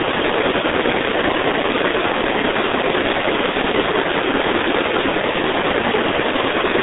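Throughout, heavy G.723.1 codec damage: the band runs from about 250 Hz to 3.7 kHz, consistent with the 6.3 kbit/s mode, leaving speech muffled, hoarse and with smeared consonants.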